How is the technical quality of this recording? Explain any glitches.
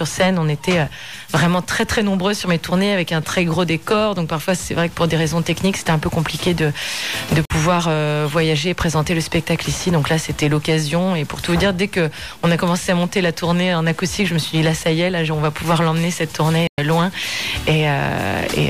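There are two short holes, at 7.45 to 7.53 s and 16.67 to 16.79 s, where the sound cuts to silence and then resumes further along, as if it had kept playing. That's likely a Bluetooth dropout, where packets arrive too late and get thrown away.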